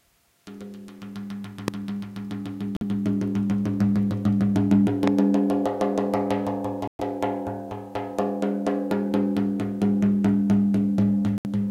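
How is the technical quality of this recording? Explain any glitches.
The recording is marred by two loud pops and three Bluetooth dropouts.

Loud pop, at 1.68–1.70 s and again at 5.08–5.10 s: a sudden voltage spike, likely from a switch, static or a driver glitch, was added to the signal. Each time, a single sharp pop about 15 dB above the surrounding sound jumps out while the sound continues beneath it.

Bluetooth dropout, at 2.77–2.83 s, 6.88–7.01 s and 11.38–11.46 s: audio packets likely failed to reach the headphones in time and were discarded. The output falls silent for about 46 ms, 116 ms and 70 ms, consistent with two, five and three lost packets. The sound then resumes further along, as though it had kept playing through the gap.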